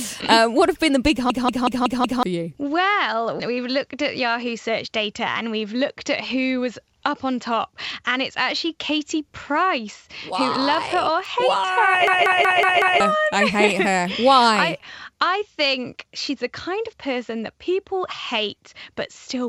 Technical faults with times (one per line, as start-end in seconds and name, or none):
1.30-2.23 system hang loop
12.07-13.00 system hang loop